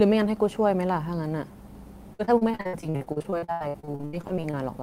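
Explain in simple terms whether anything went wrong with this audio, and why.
From about 2.13 s to 4.55 s, the speech turns choppy and robotic. That's repeated packet loss: chunks of the audio went missing or arrived too late, over and over, 32 times in that stretch. Each time, the player filled the hole by stretching out the last bit of sound it had, which gives that stuttering quality. The longest hole is about 83 ms, and nearly half of that stretch is patched-over sound.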